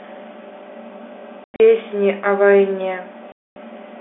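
Speech over a telephone-band line, and it's got packet loss filled with silence: dead holes with hard edges around 1.44 to 1.6 s, broken up with the longest gap about 100 ms, then a solid 240 ms dropout at 3.32 to 3.56 s, consistent with 20 ms packets.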